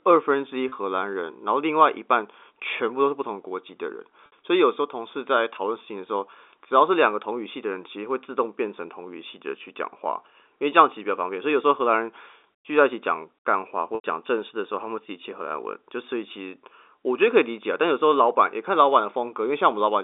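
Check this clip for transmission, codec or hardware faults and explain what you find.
Three brief dropouts stand out, all of the same kind: packet loss with pitch repetition. The speech carries the narrow 300 Hz to 3.6 kHz band of G.711 telephone coding.

At 0.69 to 0.72 s (30 ms), 4.26 to 4.32 s (60 ms) and 13.95 to 14.04 s (90 ms), the sound briefly freezes into a buzzy, held tone. The shortest gap sounds like a slightly stretched note. The two longer ones trail off toward silence before the speech cross-fades back in. The lengths fit one, two and three lost packets. The receiver fills each gap by looping the last pitch period and fading it over about 50 ms, so longer losses outlast the fill.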